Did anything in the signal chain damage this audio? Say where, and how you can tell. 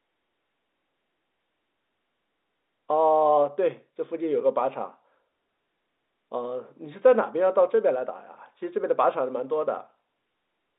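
No, nothing in the signal chain damaged this audio.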